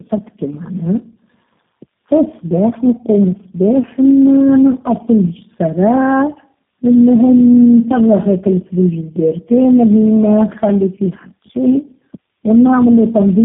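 Throughout the speech, tandem speech coding has stacked four speech codecs in a row, likely CVSD, GSM full rate and G.729A twice, each re-encoding the last one's damage. The result is rough, muffled and warbly, with nothing above 3.8 kHz.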